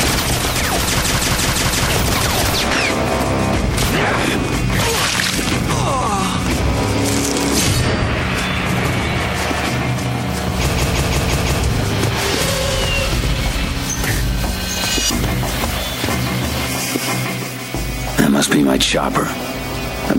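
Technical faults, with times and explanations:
1.02–1.88 s and 10.75–11.61 s: system hang loop. A 0.17 s slice, fitting an 8192-sample buffer, repeats five times at about 5.9 Hz as a machine-gun stutter while the system stalls.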